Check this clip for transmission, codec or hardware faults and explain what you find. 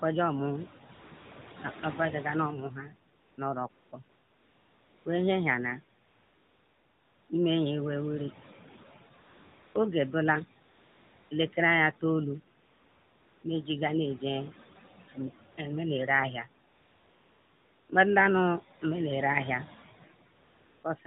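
Two faults are present: noise suppressor artifacts across the whole speech clip, and repeated AMR comfort noise in the pauses.

The noise suppressor artifacts run from start to end. The suppressor estimates the steady background in each frequency band and pulls those bands down, frame by frame, by about 17 dB. The room noise, which sits about 17 dB below the speech, drops away in the gaps and creeps back under each phrase.

AMR comfort noise appears fifteen times, between 0.94 s and 20.84 s. A tight cluster falls from 0.94 s to 1.54 s, with gaps as short as 20 ms. Longer ones follow, the longest at 6.02 to 7.30 s, with 16.68 to 17.90 s close behind. In each, the phone treated the talker as silent and stopped sending speech frames. The receiver then generated smooth, even synthetic noise in place of the real background. That noise switches on and off at each gap's edges.

The narrowband phone codec is audible as the usual cut-off above 4 kHz. 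Its coding is light, which fits the 12.2 kbps AMR-NB mode.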